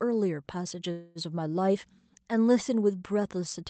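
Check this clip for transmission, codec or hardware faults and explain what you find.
One transmission fault is audible: a call audio freeze partway through the speech.

From 0.91 to 1.18 s the speech stalls. The last sound is drawn out as a fading buzz or hiss for about a quarter of a second before the speech resumes. The likely cause is packets held up in transit, leaving the jitter buffer with nothing to play. The receiver filled the gap with about 240 ms of extended sound. No speech is lost. Everything after the freeze simply arrives about 240 ms later. The call codec's band limit, around 8 kHz, also cuts off the highest frequencies.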